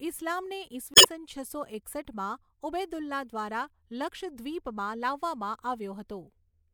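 From 0.93 to 1.06 s the speech briefly breaks up from damaged data in a compressed stream: the decoder misreads corrupted frames until it resyncs on a valid header before "છસો એકસઠમાં ઉબૈદુલ્લા દ્વારા".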